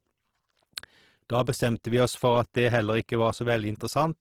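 From start to end the speech sounds grainy and rough, with tonal parts turning noisy, though the band still reaches 20.4 kHz. The likely cause is Opus compression in its music mode filling bit-starved bands with noise, which fits a bitrate near 16 kbps.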